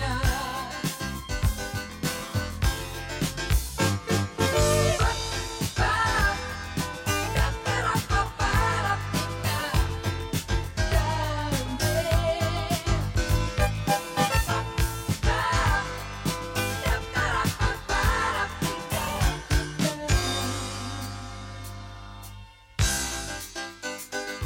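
A rough, slightly doubled quality runs through the whole clip, with fixed notches combing the spectrum from roughly 30 Hz upward. This is channel delay (comb filtering): one channel lags by about 20 ms, and summing to mono cancels regularly spaced frequencies.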